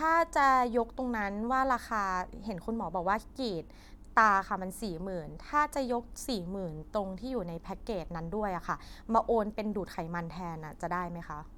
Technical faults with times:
none

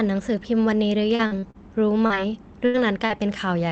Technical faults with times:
1.15-1.57 repeated packet loss (robotic sound)
2.06-2.13 short concealed packet loss
2.66-2.77 burst of packet loss
3.06-3.13 short concealed packet loss

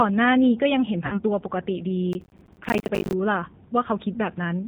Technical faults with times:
0.00-4.67 G.729 codec
1.06-1.20 VoIP packet loss concealed by the speech codec
2.13-3.13 processor overload crackle

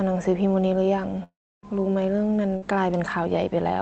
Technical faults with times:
1.23-1.65 long network dropout
2.57-2.64 burst of packet loss

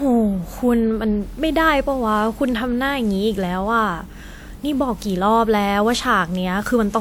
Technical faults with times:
0.00-7.00 generation loss

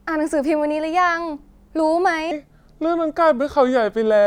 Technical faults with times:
2.31-4.26 section at the wrong speed

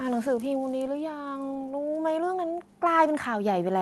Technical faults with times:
0.05-1.05 automatic gain falling
2.79-3.82 automatic gain rising

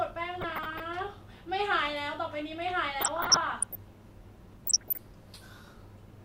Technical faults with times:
0.35-0.82 DAB burbling
3.01-3.75 DAB burbling
4.65-5.00 DAB burbling

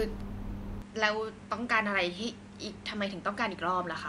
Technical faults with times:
0.82-4.08 input switched to a poorer device

